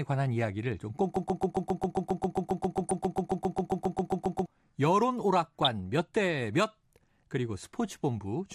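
Across the whole speech clip the sound is dull and plainly gurgling, with a granular distortion. This steady texture is likely MP2 compression at a rate consistent with about 80 kbps, where upper sub-bands drop out and the remaining bands are coarsely quantised.

From 1.16 to 4.46 s a broken-record loop takes over: a fragment of about 0.13 s repeats exactly, back to back, some 25 times, likely because the stream stalled and resent its last buffer. Unlike a stutter or dropout, every repeat is identical, and the speech from that span never arrives.

DAB burbling appears at 2.80 to 2.91 s, inside the loop, and again at 5.44 to 5.67 s. Bit errors at a rate of a fraction of a percent corrupted the MP2 data, putting brief blips of noise into single sub-bands and making sub-bands jump in level for up to a frame. These differ from the steady compression dullness because they are sudden and isolated.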